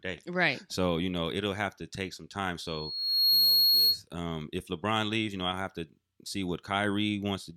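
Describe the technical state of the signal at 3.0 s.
At 3.0 s the signal carries loudspeaker feedback squeal, from 2.66 to 4.01 s, between "to take some time" and "um if". A microphone-to-loudspeaker loop runs away at one frequency, so a single 4.3 kHz tone swells over roughly the first 0.7 s to about 10 dB above the speech. That steady, self-building pitch separates it from broadband hiss or a fixed mains hum.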